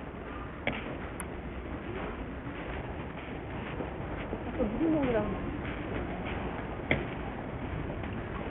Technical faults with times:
0.00-8.50 Bluetooth SBC compression

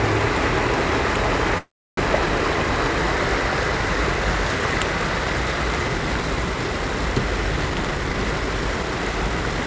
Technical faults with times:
1.58-1.99 call audio freeze
7.69-9.66 jitter buffer speed-up

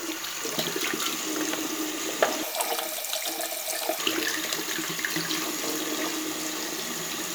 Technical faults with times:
2.43-3.99 audio read two samples at a time (double speed)

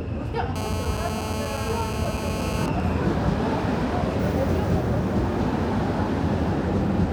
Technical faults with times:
0.56-2.64 GSM phone buzz
2.64-3.76 GSM signalling bursts

